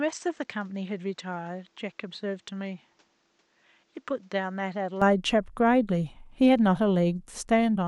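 From the start to 5.02 s, the speech is dull and narrow, with nothing above 8.2 kHz. It sits roughly 10 dB quieter, over faint background noise. At 5.02 s it opens up with no gap. The input had likely switched to a poorer device.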